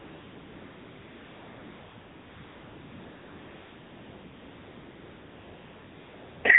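From the start to the end, the speech passes through the AMR narrowband mobile codec. Nothing above 4 kHz survives, so the sound is boxy and telephone-like. The codec models the vocal tract and drives it with a sparse pulse excitation in short subframes. Damage is plainly audible as a buzzy, synthetic edge on the voice, and the coarseness fits a low mode of around 7.4 kbps.

From 0.00 s to 6.44 s, AMR comfort noise is heard. Across that whole span the sending side treated the talker as silent and sent no speech frames. The receiver filled the gap with generated noise built from a rough estimate of level and spectrum. In place of the real background there is a steady, smooth hiss with no detail in it, and it drops away only after 6.44 s.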